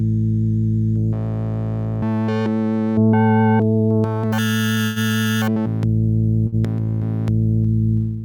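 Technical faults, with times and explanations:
4.84–4.99 s, call audio freeze: the sound halts and its last moment trails on as a fading buzz or hiss for about 0.12 s. Playback then resumes where it stopped, likely after packets were delayed and the jitter buffer emptied.
6.47–6.55 s, short stall from a late packet: one late packet made the receiver stretch the last sound by about 53 ms, a brief hold with a slight buzz or dip before playback resumes, shorter than the freeze.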